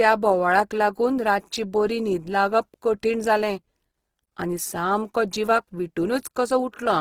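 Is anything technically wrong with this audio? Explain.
Yes. Throughout the speech there is Opus compression damage, and it is plainly audible. The likely cause is Opus in its music mode at a bitrate around 16 kbps. With few bits to spend, the codec fills bands with folded or noise content. The voice turns grainy and rough, although the bandwidth still reaches about 20.4 kHz.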